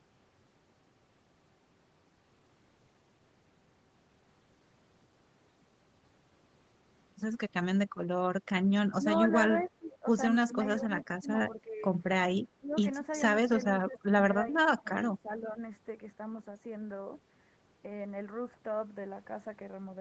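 From 9.59 to 9.68 s a faint, delayed ghost of the speech slips through, roughly 25 dB below the talker and trailing by 385 ms. This is an echo leak, likely from a far-end loudspeaker whose echo canceller let some residual return. Overlapping it, from 9.66 to 11.84 s, the speech dips and thins in patches totalling about a second, sinking by around 15 dB at worst. That is speech suppressed in double talk, likely the canceller mistaking simultaneous talk for echo and turning everything down. A second brief echo leak surfaces at 10.99 to 11.04 s, louder at about 20 dB under the speech and again 385 ms late. The suppression returns briefly at 12.59 to 12.84 s, a short dip of around 15 dB, then again from 13.86 to 15.6 s, where pieces adding up to under a second are pulled down as much as about 20 dB.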